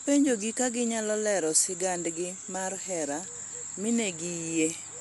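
Speech running throughout with plainly audible Dolby Digital compression, likely from a low-bitrate encode around 64 kbps: dull, with rough fluttering noise, and a spectrogram showing nothing above 11.4 kHz.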